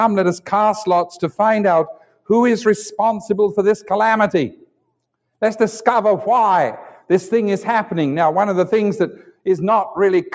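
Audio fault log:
throughout: noise suppressor applied to music or sounds. A suppressor designed for speech stays active over the whole clip. It treats steady, held and fading parts of the sound as noise and pulls them down. Sudden onsets mostly pass, while sustained parts sink. The gain therefore keeps moving, swinging by around 5 dB. That moving gain is heard as pumping and thinning. The call path's band limit also leaves nothing above 8 kHz.
1.9–2.3 s, 4.51–4.9 s, 9.26–9.46 s: sound cut by the noise suppressor. At each of these three points the suppressor judged the sound to be noise. It cut it harder than the surrounding audio. The deepest drops are about 19 dB, about 19 dB and about 18 dB. Each lasts a few hundred milliseconds at most, the last one shortest. The level sags or the decay ends early, then recovers.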